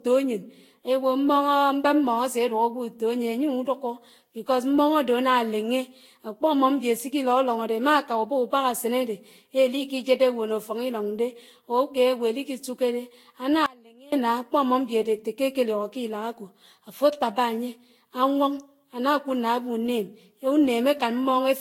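Throughout, the speech sounds swirly, hollow and smeared, with blurred attacks and nothing above 16.6 kHz, likely generation loss from roughly seven passes through a lossy Vorbis-type codec. From 13.66 to 14.12 s the speech abruptly drops to a faint residue about 25 dB down for 0.46 s: an audio dropout, likely the signal lost while the path stayed live.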